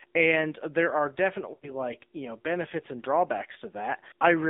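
Throughout, the speech sounds thin, buzzy and synthetic, confined to roughly 250 Hz to 3.7 kHz. That is the AMR narrowband mobile codec, at a low bitrate that fits 7.4 kbps.

From 1.54 to 1.73 s, after "and there are", the sound smears into a drawn-out warble and fades before "you know benefits and". Lost AMR speech frames, about four, were filled in by the decoder repeating old settings with falling gain.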